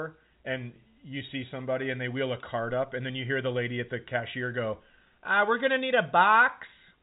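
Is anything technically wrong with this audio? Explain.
No, nothing is wrong: the speech is carried over G.711 telephone coding, which is why the band stops below 4 kHz.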